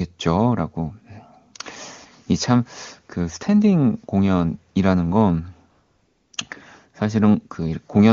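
From 5.71 to 6.33 s, a 620 ms gap shows AMR comfort noise. The sending phone's voice activity detector treated this stretch as silence and stopped transmitting speech frames, so the receiver generated synthetic noise from a rough estimate of background level and spectral shape. The genuine background drops out and a smooth, uniform hiss takes its place, switching in and out at those boundaries. The surrounding wideband speech is clean, consistent with a high AMR-WB rate.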